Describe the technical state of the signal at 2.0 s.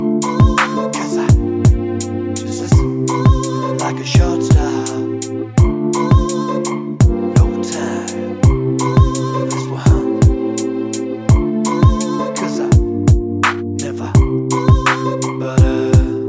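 At 2.0 s the signal is intact, with no dropout, distortion, glitch or other fault to be heard.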